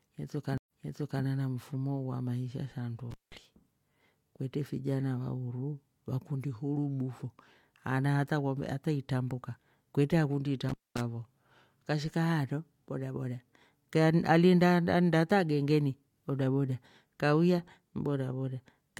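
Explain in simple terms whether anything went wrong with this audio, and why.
A stream reconnect happens between 0.58 and 1.23 s. The connection dropped, the sound went silent for about 0.1 s, then restarted about half a second earlier, so a short stretch repeats.

Intermittent contact appears at 3.11 to 3.35 s and 10.69 to 11.01 s. A loose connection opened for about 0.2 s each time, cutting the speech out with crackles at both edges.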